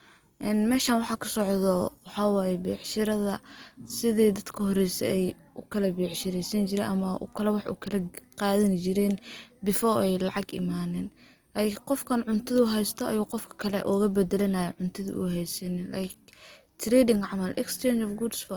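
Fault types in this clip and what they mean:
Opus compression: The speech was likely encoded with Opus at a low bitrate, which fits roughly 24 kbps, so the encoder filled starved bands with folded or noise-like content. This gives plainly audible grainy, rough tones, while the bandwidth still extends to about 20.1 kHz.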